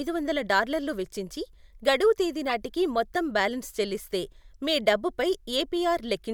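A speech recording with one corrupt frame decoded from 2.48 to 2.52 s: damaged compressed data, roughly four frames, was played anyway, giving a short chirp or burst of noise peaking around -20 dBFS. A spectrogram shows a brief smear of misplaced energy; the waveform shows a jagged blip.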